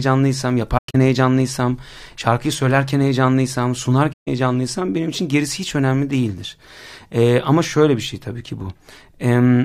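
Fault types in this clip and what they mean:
AAC frame loss with muting: lost AAC frames decoded as silence, giving soft-faded gaps of roughly 150 ms each, before "heyecanlıysam şarkıyı söylerken heyecanlıysam" and again after it.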